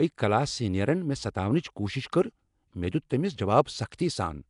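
From start to finish the speech carries a rough, hissy halo and a smeared, underwater quality, and nothing is present above 10.6 kHz. The likely cause is Nellymoser compression, the old Flash microphone codec: it codes short blocks at a fixed, very low number of bits per sample, so weak bands get no bits and are refilled with noise. The damage is plainly audible, and the degree fits a rate of around 44 kbps.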